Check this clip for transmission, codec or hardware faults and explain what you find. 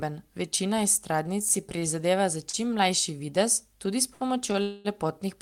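Yes, there are several network-timing faults.

Repeated stalls (stutter), 1.23 to 1.85 s: packets kept arriving late, so four short holds (longest 30 ms, 64 ms total) make the speech drag and stutter.

Short stalls from a late packet: at 2.50 s just before "čim mlajši" (37 ms), at 4.13 s (69 ms), and at 4.52 s right after "tudi s" (20 ms), the buffer ran dry and the last sound was stretched, audible as a held sound with a slight buzz or dip.

Call audio freeze, 4.62 to 4.88 s, still after "tudi s": the sound hangs as a fading buzz or hiss for about 223 ms without going silent, likely from packets held up in transit.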